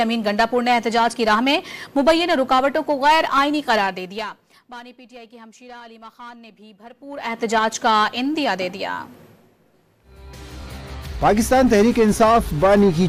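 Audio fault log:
No faults found.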